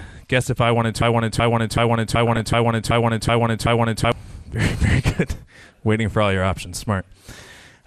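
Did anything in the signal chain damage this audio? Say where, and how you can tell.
Yes. MP2 compression throughout: the speech sounds dull and gurgling, with upper bands flickering out, likely a codec stage coding at a low rate around 80 kbps.

Broken-record loop from 1.02 to 4.12 s: a 378 ms fragment repeats back to back, likely a stalled stream or player resending its last buffer.

DAB burbling at 2.25 to 2.40 s and 4.93 to 5.16 s: short noise blips in single sub-bands as reception bit errors corrupt sub-band samples frame by frame.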